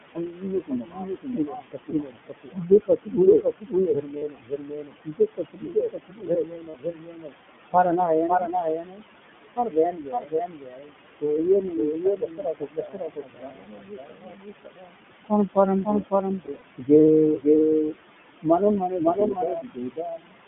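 From the very start the whole clip has a second copy of itself riding along, roughly half a second behind and at about the same loudness. That's a doubled audio track. It's full-band with no room colour on it, so it's not an echo. It's the same signal landing twice, most likely because a slower capture path picked it up a second time and both got mixed in. Every phrase is shadowed by a clean repeat.

Also present throughout are noise suppressor artifacts. The room noise, which sits about 13 dB under the speech, gets pushed down by about 21 dB in the gaps and comes back up under the talking.

On top of that is the iLBC codec. Nothing gets through outside roughly 150 Hz to 3.5 kHz, so everything sounds phone-band and boxy. The coding is plainly audible as a rough, slightly synthetic grain. The sound fits iLBC's 20 ms frame mode at 15.2 kbps.

The suppressor also eats into the speech itself, which is speech cut by the noise suppressor. 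It happens from 0.15 to 7.36 s, 7.72 to 9.03 s, 9.56 to 10.95 s, 11.21 to 14.95 s, 15.29 to 16.91 s, 17.35 to 17.48 s, 17.81 to 17.97 s and 18.43 to 20.37 s. It's treating quieter parts of the voice as noise and pulling them down by up to about 22 dB, so endings and soft consonants sound swallowed or faint.

There are lost iLBC frames at 4.18 to 4.24 s and 6.70 to 6.76 s. Each is a 40 ms gap, which fits two 20 ms frames. The decoder fills each one by repeating the last pitch cycle with some noise, so you hear a brief held, buzzy vowel before the voice snaps back almost immediately. From 16.46 to 16.63 s there's a scattered cluster of about 80 ms of losses, with the longest run around 40 ms. That gives a few quick buzzy stutters in a row.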